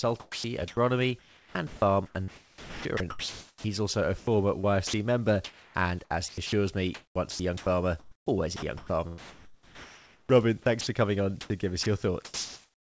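A speech recording carried over a G.722 call path, with no content above 8 kHz, shows sound chopped by the voice detector at 0.20–3.64 s (ending before "also a"), 4.18–4.93 s, 6.28–10.87 s and 11.41–12.81 s. Quiet stretches are swapped for comfort noise, likely from the sender's voice detector gating. At 5.44–5.74 s, just before "and as", sound is dropped by the voice detector: about 0.3 s of steady comfort noise replaces it, likely because the detector mistook quiet speech for background.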